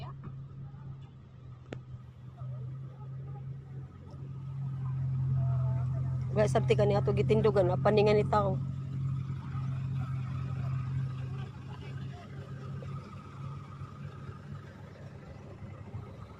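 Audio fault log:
0.0–2.0 s, adaptive stream starting at a low bitrate. Nothing sounds above about 7.9 kHz, and codec artefacts are stronger. This fits a player opening on a roughly 12 kbit/s Opus stream to start fast. At 2.0 s, quality jumps to full band with no gap, pointing to a switch to about 64 kbit/s.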